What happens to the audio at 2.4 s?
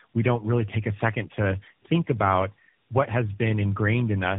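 The speech sounds rough, muffled and warbly, with nothing above about 3.8 kHz. This is tandem speech coding, present across the whole clip, not just this moment. The roughness fits a call that passed through three low-rate mobile speech codecs in a row, something like AMR-NB, then GSM full rate, then AMR-NB again, decoded and re-encoded at each link. Each coder worked on the previous one's already damaged output, so the artefacts stack up.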